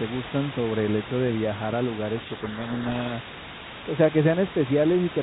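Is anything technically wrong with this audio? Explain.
Yes. From 2.16 to 3.13 s there is a codec payload misread: the decoder unpacks G.726 code words in reversed bit order, so the speech is buried under harsh, grinding distortion.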